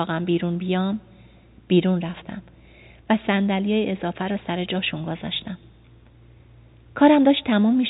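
No faults found; the speech is carried over G.711 telephone coding, so nothing above 4 kHz comes through and a faint level-following hiss sits well under the signal.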